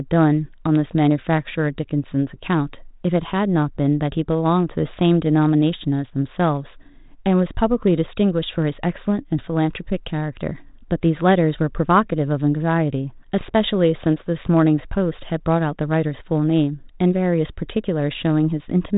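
Between 13.41 and 13.52 s, bit errors on an ADPCM link corrupt about one coded bit in a few hundred. Each flip throws off the decoder's step size and predictor, so the speech breaks into pops and a rough burst with brief jumps in level.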